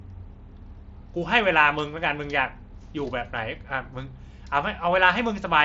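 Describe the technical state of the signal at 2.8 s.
At 2.8 s the signal is intact, with no fault present, and the speech carries the band limit of the Bluetooth mSBC headset codec it passes through, with nothing above about 7.7 kHz.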